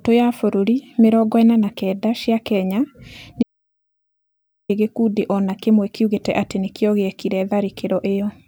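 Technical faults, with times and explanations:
3.43–4.69 s, audio dropout to silence: the speech cuts to total silence for 1.26 s, with no room tone. It resumes at "gĩkundi o na kĩmwe". The input was likely lost, so only silence was written.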